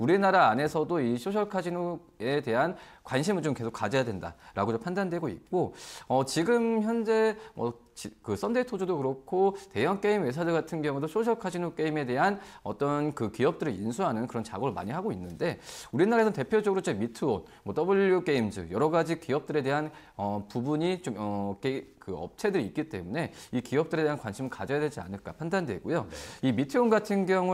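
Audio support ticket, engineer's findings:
Nothing stood out on listening; no symptoms to log against any component.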